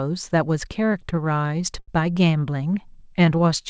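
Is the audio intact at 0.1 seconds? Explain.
Yes, at 0.1 s the speech comes through intact, with only the expected band limit of the G.722 call path, which leaves nothing above 8 kHz.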